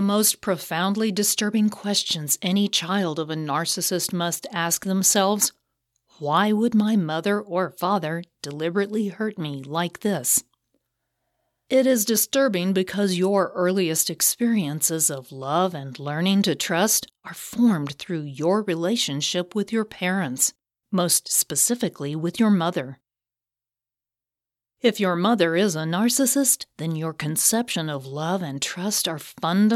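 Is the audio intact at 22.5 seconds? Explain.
Yes, the audio is intact at 22.5 seconds, with no dropout, click, distortion or other fault to be heard at that moment.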